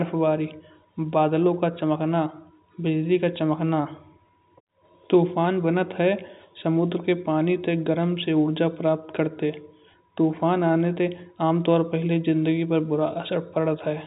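Nothing stood out on listening to this speech clip, which carries the narrow, band-limited sound of G.711 telephone coding.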